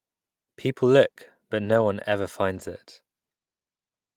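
At 1.65 to 1.83 s and again at 2.55 to 2.61 s, there is a lost packet rebuilt from error correction. Packets went missing, and the decoder played the low-bitrate copies carried in the following packets. There is no gap, but the speech turns briefly rough and noisier.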